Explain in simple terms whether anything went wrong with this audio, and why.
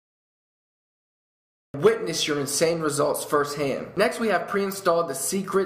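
For the first 1.74 seconds there is dead silence, and then the sound jumps in abruptly with no gentle lead-in, as if it began mid-way. This is a cut-off start: the recording began late, so everything before 1.74 s was lost.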